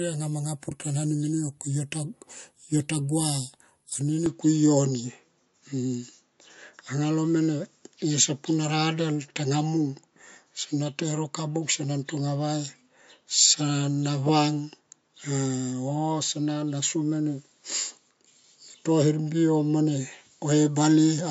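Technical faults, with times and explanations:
Throughout: MP3 compression, likely cause. Squeezing the audio to around 51 kbps leaves the encoder short of bits, so it discards everything above 11.3 kHz and drops weak frequency detail frame to frame, giving a plainly audible watery, swirling texture to the speech.
4.26 to 21.31 s: input switched to a poorer device, likely cause. With no gap at the change, the signal shifts onto hardware passing nothing above 7.4 kHz, so the speech turns duller and boxier, its level shifts by roughly 5 dB, and a faint new noise floor appears well below it.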